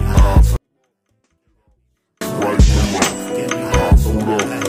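From 0.56 to 2.21 s, a 24-bit alignment error drops the audio about 48 dB, clean but nearly inaudible, as low-justified 24-bit samples are read as 32-bit integers.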